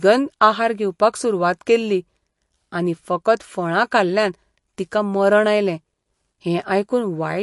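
Throughout the speech, the audio was likely squeezed through MP3 compression with too few bits to go round, which fits a low rate near 48 kbps. Starved of bits, the encoder discarded everything above 11.3 kHz and dropped quieter frequency lines that then flicker in and out between frames. The damage is plainly audible: the top end is dull and cut off, the voice has a watery, swirling texture, and s sounds pick up a metallic chirp.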